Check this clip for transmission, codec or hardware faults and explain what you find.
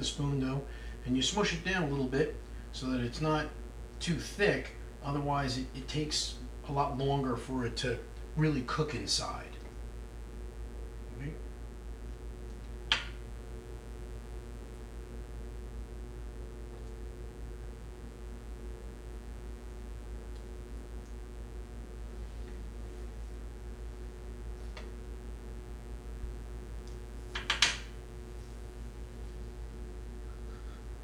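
One fault runs through the whole clip: mains buzz tied to a 60 Hz supply, sitting roughly 20 dB below the sound. Switching spikes twice per cycle spray harmonics into the kilohertz range, giving a steady, raspy edge rather than the smooth low tone of plain hum.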